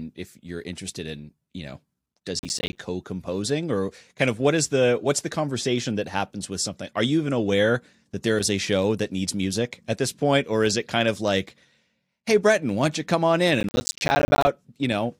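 The processor repeatedly missed its deadlines for buffers of about 10 ms, leaving silent gaps that form a gritty processor overload crackle. It runs from 2.39 to 2.78 s after "in you know does" and again from 13.61 to 14.47 s after "you come on in".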